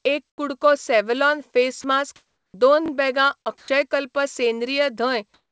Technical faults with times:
0.30-0.38 comfort noise in place of the background
1.82-1.84 sound dropped by the voice detector
2.16-2.54 comfort noise in place of the background
3.58-3.68 sound dropped by the voice detector
5.34-5.51 comfort noise in place of the background

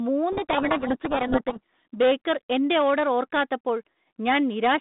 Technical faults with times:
0.32-1.84 codec payload misread

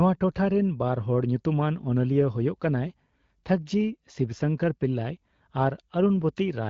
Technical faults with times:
none

